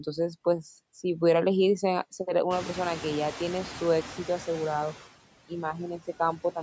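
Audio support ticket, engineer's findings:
Noise suppressor artifacts throughout. Background pumps down about 15 dB between phrases and swells back under speech. Per-frame band gating by call-side suppressor. Room noise jumps about 21 dB near 2.5 s, sitting about 16 dB below speech.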